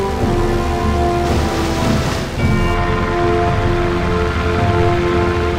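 Nothing in this audio stands out as a technical fault, with no glitches, dropouts or other problems to point to anywhere along the way.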